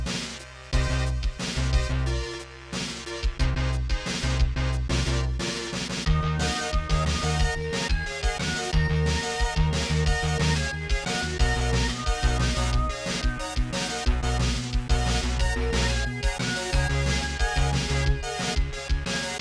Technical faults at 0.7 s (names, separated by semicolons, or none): none